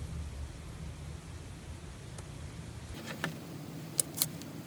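At about 2.94 s the audio suddenly lurches forward at twice its proper speed and jumps an octave up, 12 semitones, and stays that way right to the end. That's audio read two samples at a time (double speed): the playback side grabbed pairs of samples as single frames, as if the stream had two channels or wider samples, so it skipped through the material at 2x.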